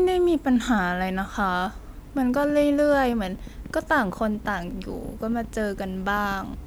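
From 2.18 s to 6.55 s a train of clicks runs over the speech. Around forty sharp pops arrive at about 8 per second, unevenly spaced, peaking near the level of the voice. They are likely interference or a faulty connection or power supply injecting pulses.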